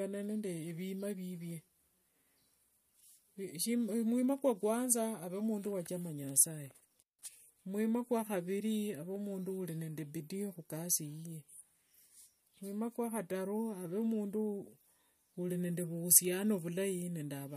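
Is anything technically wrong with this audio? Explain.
Yes. From 6.98 to 7.23 s, after "ave mundu wachama nasaye", an intermittent contact, a loose connection opening, cuts the speech for about 165 ms, with crackle at both edges and faint hiss between.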